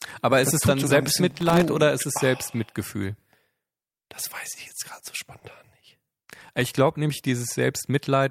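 Throughout the clip there is clock drift between sender and receiver. The sender's clock runs slow by roughly one and a half percent, so the receiver's buffer keeps draining and has to be padded. On a waveform this shows as small irregular stretch points scattered across the whole clip rather than at one spot.

From 0.76 to 4.0 s, starting after "ist es" and ending before "das weiß ich jetzt", the receiver makes repeated timing corrections. It plays at 98 percent speed and stretches out some 70 ms in total. A spectrogram shows slightly lengthened, unevenly spaced segments.

Inside that stretch, from 1.30 to 1.65 s, processor overload crackle appears. Dozens of tiny buffers, each well under a millisecond, missed their deadlines and were replaced by silence, which produces a gritty tearing. The waveform shows a dense comb of hard-edged dropouts. The spectrogram shows thin vertical broadband streaks.

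Right after "ich jetzt gerade so", from 5.40 to 5.44 s, there is a short stall from a late packet. The buffer ran empty, so the last sound was held for 20 ms, and the audio then resumed with nothing lost. The result is a brief smeared hold. It appears as a flat, repeated patch in the spectrogram.

From 6.06 to 8.19 s, more repeated timing corrections at 98 percent speed stretch out about 50 ms. From 6.30 to 6.66 s, another burst of processor overload crackle with some thirty silent micro-gaps shows the same broadband speckling.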